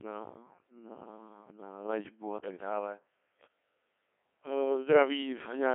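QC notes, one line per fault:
Throughout: Codec 2 vocoder. Speech is rebuilt from sine waves at a rate near 1.6 kbit/s, so it sounds heavily robotic and buzzy. Spectrogram shows rigid harmonic stripes, 250 Hz to 3.4 kHz only.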